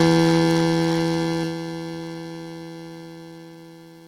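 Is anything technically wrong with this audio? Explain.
Yes, the music has two playback timing faults.

At 1.43 s there is a skip ahead: a chunk of roughly 0.7 s was discarded while later audio was already queued, so playback jumps forward with no fill, and the music on either side of the cut is butted together almost directly.

From 3.16 s to the end, a jitter buffer speed-up is heard: the receiver trims short pitch-period slices repeatedly to drain excess buffered delay, about 0.3 s in total. The music runs at roughly 126% speed with unchanged pitch, so the tempo audibly rushes.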